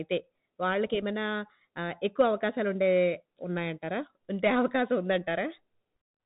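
The speech passed through a Bluetooth CVSD headset codec for the whole clip, coding each sample as a single up-or-down step, which fits a 64 kbps stream. Nothing above 3.8 kHz survives, and the adaptive step plainly roughens the sound with scratchy sibilants and grainy hiss.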